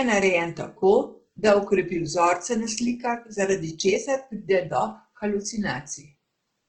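From start to finish the speech carries Opus compression artefacts. The damage is plainly audible. The speech turns rough and grainy rather than swirling. Sustained vowels take on a noisy, hashy edge. The coarseness points to a very low bitrate, around 16 kbps. At that rate the encoder cannot spend enough bits per band. It keeps each band's energy but fills the detail with folded or noise-like content. The likely cause is the CELT music mode, which keeps the full bandwidth but sounds gritty.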